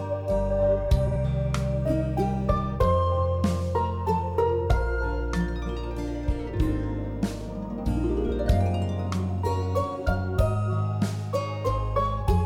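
A brief garbled flutter is heard from 1.07 to 1.17 s and again from 8.26 to 8.31 s. These are frames out of order: two adjacent blocks of about 43 ms, then about 21 ms, played in swapped order, with no time lost.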